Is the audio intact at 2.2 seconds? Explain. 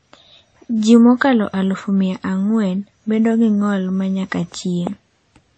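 No. At 2.2 seconds the speech shows transcoding between lossy codecs, present throughout the clip. Nothing is heard above about 8.3 kHz. Two layers of coding damage sound together: the different artefacts of the two codecs are heard at once. The likely cause is a low-bitrate MP3 re-encoded to WMA. The second codec spent its bits on the first one's artefacts and added its own. The lower cut-off survived the chain.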